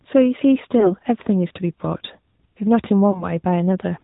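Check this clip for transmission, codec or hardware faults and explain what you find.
Two faults are audible in this speech: the whole clip has passed through the AMR narrowband mobile codec, and lost AMR speech frames break it briefly twice.

Throughout the clip the speech sounds muffled and buzzy, with a synthetic edge and nothing at all above 4 kHz. That is the AMR-NB codec at work. It samples at 8 kHz and rebuilds the speech from a vocal-tract model excited by a few pulses per subframe, so detail is lost in an obviously audible way. The damage fits a mid-range mode of about 10.2 kbps.

At about 0.80 to 0.92 s and again at about 3.12 to 3.26 s, the speech briefly wavers and dips, then comes back rough for a moment. Each one sounds like a single lost AMR speech frame of 20 ms. The frame failed its checksum after a radio error, so the decoder filled the gap by repeating the previous pitch and vocal-tract settings at lower gain, and it took a moment to settle again.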